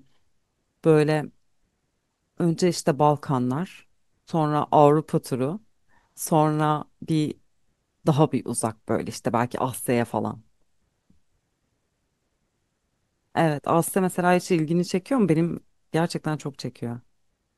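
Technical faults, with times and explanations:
No technical faults detected.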